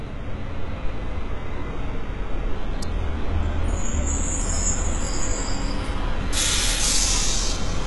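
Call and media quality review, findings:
Treble on these everyday sounds is gritty and metallic for the whole clip, with nothing above 11.4 kHz. Likely HE-AAC compression at a very low bitrate, around 12 kbps: the top end is rebuilt from copied lower bands, so its harmonics don't line up.

Sharp single snap at 2.83 s, sitting on top of the sound. Likely an electrical switching spike, where a nearby switch, motor or static discharge throws a brief arc that the audio line picks up.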